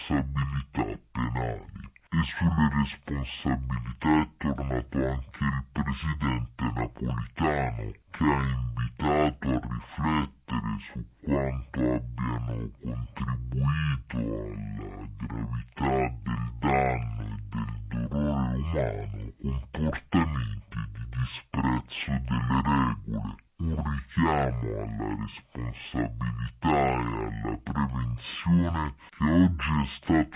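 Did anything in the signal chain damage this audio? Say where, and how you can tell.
Yes. The damage happens at playback, and it's a wrong sample rate that lasts the whole clip. Everything runs at exactly half speed and sits a full octave low, 12 semitones down, with pitch and timing dragged together by the same factor. That lockstep shift is the giveaway: the samples went out at half the rate they were captured at, with no conversion, which fits 16 kHz material being clocked out at 8 kHz.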